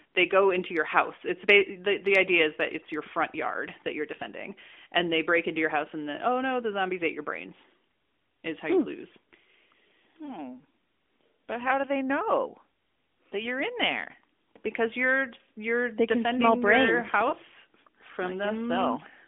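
At 10.26 to 10.37 s, and at 17.30 to 17.34 s just after "you're they defending your", a lost AMR speech frame gives a brief dip or warble. The decoder repeats the previous frame at falling gain, visible as a smeared spectrogram patch and a shrunken waveform envelope.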